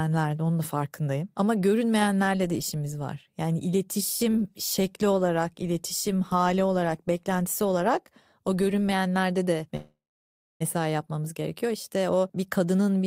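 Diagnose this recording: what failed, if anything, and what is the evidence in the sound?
Call audio freeze at the network stage, 9.75 to 10.62 s: after "olarak o görünmeyenlerde de" the last sound trails into a fading buzz, then 0.63 s of silence, and "yapmamız gerekiyor" resumes intact. Packets likely stalled and emptied the jitter buffer, inserting 850 ms of delay with nothing lost.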